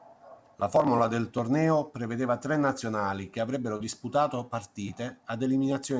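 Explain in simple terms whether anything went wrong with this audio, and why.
Around 3.77 to 3.83 s, just after "tre nazionali che avrebbero", there's a short concealed packet loss. About 30 ms of audio arrived too late, so the receiver patched the gap by stretching the previous sound and blending back, leaving a quick smear or wobble.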